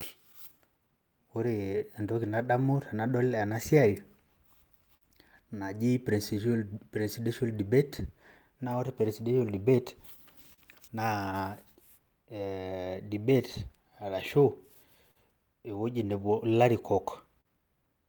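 A speech recording about 18 seconds long suffers from clock drift between sender and receiver for its whole length. The sending device's audio clock runs roughly 3 percent slower than the receiver's, so the jitter buffer keeps draining faster than it refills. The receiver has to compensate again and again, and the result is small timing hiccups that recur at uneven intervals throughout the clip rather than one clean fault. That compensation shows up as repeated timing corrections from 0.59 s to 17.36 s. Because the receiver is always short of incoming audio, every edit goes the same way: short pieces are repeated or stretched to fill time, adding roughly 300 ms over the span, equivalent to playing at 98 percent speed. The edits are spaced unevenly. Scattered short gaps also appear in two stretches, where packets were lost or arrived late and the receiver covered each hole by extending the last bit of sound. 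Between 0.01 s and 10.61 s there are about ten of these, totalling around 150 ms. Between 13.82 s and 17.48 s there are about four more, totalling about 100 ms. None is longer than about 40 ms.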